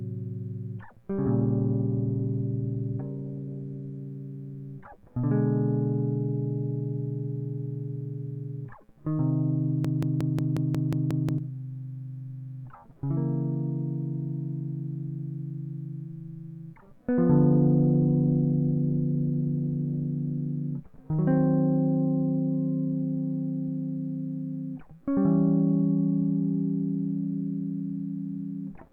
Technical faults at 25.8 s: none

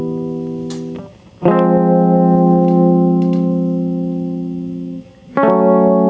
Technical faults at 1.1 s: gain pumping

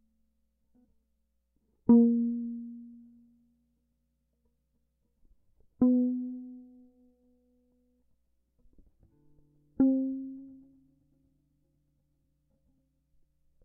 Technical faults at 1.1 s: none

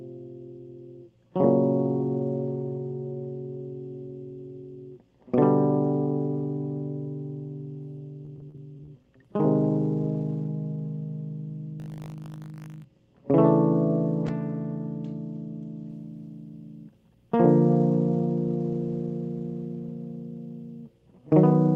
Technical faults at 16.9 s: none

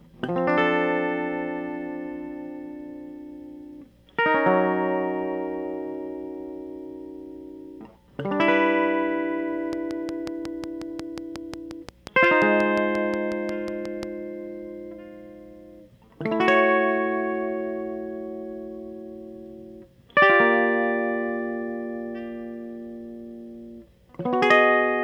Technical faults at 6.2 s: none

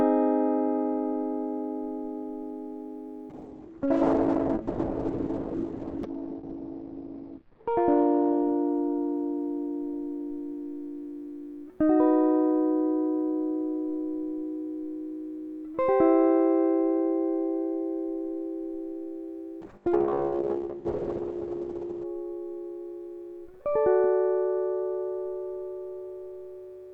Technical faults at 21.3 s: call bitrate drop

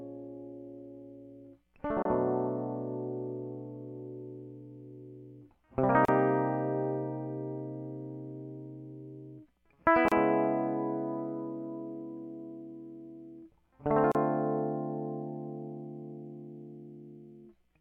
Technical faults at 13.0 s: none

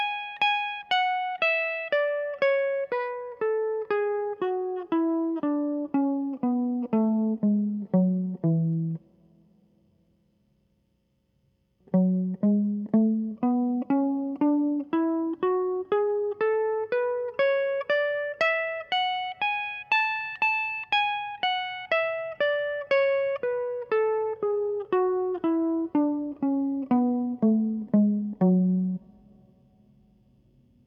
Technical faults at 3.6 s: none

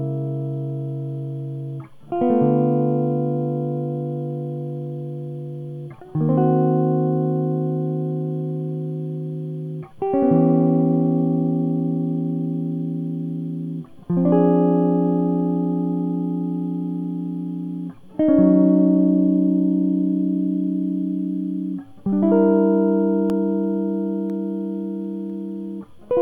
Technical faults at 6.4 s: none

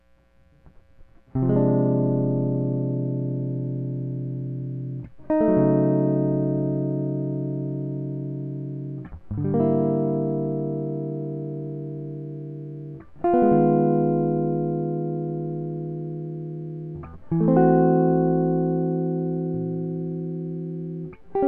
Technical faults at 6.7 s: none

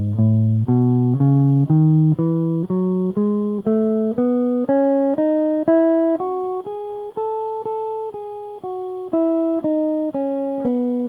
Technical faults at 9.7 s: none

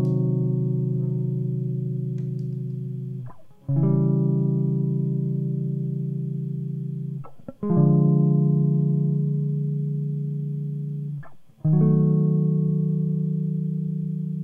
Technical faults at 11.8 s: none

